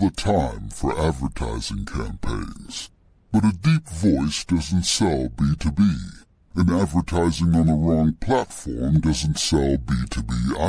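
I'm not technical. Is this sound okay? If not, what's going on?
No. The whole recording, start to finish, has a wrong sample rate fault: it plays back slower than it was recorded, at about 69% of normal speed, so the speech drags and every voice sounds deep and sluggish, roughly six and a half semitones low. That fits audio made at 32 kHz being played back as if it were 22 kHz. Speed and pitch drop together, which distinguishes it from a pitch-only change.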